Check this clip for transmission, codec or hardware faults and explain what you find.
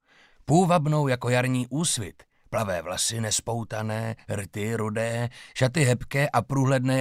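No transmission, codec or hardware faults are audible here.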